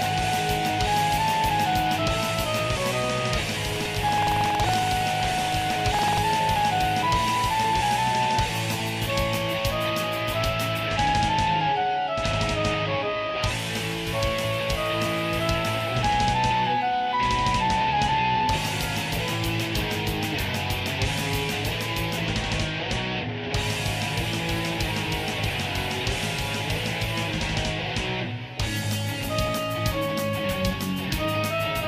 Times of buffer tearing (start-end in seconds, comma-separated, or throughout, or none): 3.72-6.20